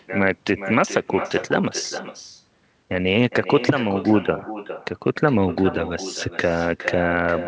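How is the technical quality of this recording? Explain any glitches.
The quality is compromised by one persistent fault. Echo with no canceller: throughout the speech, the far end's loudspeaker feeds its microphone unchecked, so every phrase returns around 0.4 s later as a thinner copy about 12 dB quieter. The band stops at 8 kHz, which fits the G.722 call path.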